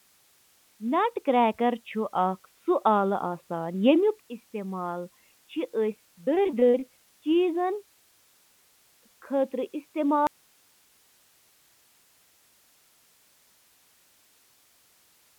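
At 10.27 s the speech cuts out abruptly and never returns. This is an audio dropout to a faint residue. The source was likely lost while the path stayed live. Only hiss remains, about 40 dB below the speech, which is band-limited to 4 kHz.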